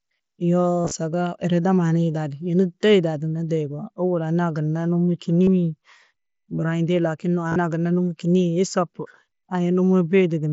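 Around 0.82 to 0.91 s the speech picks up concealed Bluetooth headset packet loss. Several dropped stretches are spread across roughly a tenth of a second, and the longest unbroken gap is about 37.5 ms. The receiver fills each hole by repeating a short, well-matched slice of the waveform just before it, so the runs come out as a buzzy, steady tone at full level, followed by a slight warble as the real audio returns.

The same thing happens briefly at 5.44 to 5.47 s, a single gap of about 45 ms.

It comes back from 7.48 to 7.56 s, just before "gunna numo", with the losses spread over about 75 ms and again a longest run of 37.5 ms. All of this rides on the wideband mSBC headset link, which has the band-limited quality you'd expect from audio that tops out around 8 kHz.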